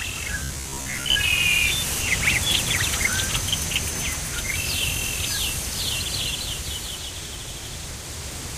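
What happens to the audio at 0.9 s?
At 0.9 s you're in the middle of a robotic sound from repeated short buffers, running from about 0.44 to 1.16 s. The audio turns into a stiff, metallic buzz at about 66.7 Hz. That pitch points to a 15 ms chunk getting replayed over and over, likely because fresh audio wasn't arriving fast enough and the software kept filling the gap with the last buffer. Around half of what you hear there is repeated material, so the real sound gets skipped.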